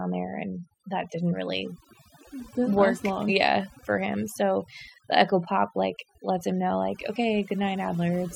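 From start to finish the speech carries overdone noise removal. A noise reduction stage set far too aggressively has cut individual frequency bands down hard wherever they sat close to its noise estimate, taking the softer parts of the voice along with the noise. Pauses fall to near silence dotted with twinkling specks. A spectrogram would show a black background with isolated bright flecks and ragged, gappy harmonics.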